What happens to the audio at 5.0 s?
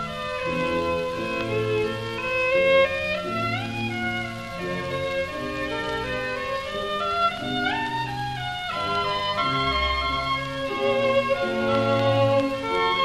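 Nothing goes wrong at 5.0 s; the audio passes through that moment intact, with no dropout, click or distortion to be heard.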